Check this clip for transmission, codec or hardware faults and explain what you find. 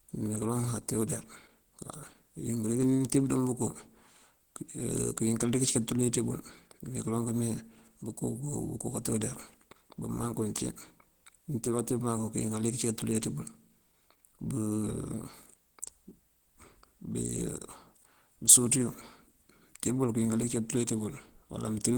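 One fault is present, lasting the whole clip: Opus compression, the likely cause of plainly audible damage. The encoder seems to be in its hybrid speech mode at a rate that fits roughly 16 kbps. Short of bits, it fills bands with folded or noise content, so the speech sounds rough, grainy and hoarse. A spectrogram would show fullband content up to about 20.1 kHz, with upper bands smeared and noisy rather than holed.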